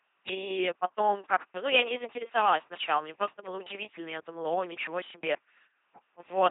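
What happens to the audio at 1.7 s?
At 1.7 s the speech has a buzzing, mechanical robot quality, with nothing above about 3.8 kHz. This is the LPC-10 vocoder, present across the whole clip rather than at that moment alone. It rebuilds speech from a simple vocal tract filter fed by either a pulse train or noise, treating each instant as fully voiced or fully unvoiced. The damage is heavy, and the sound fits a 2.4 kbit/s LPC-10 coder.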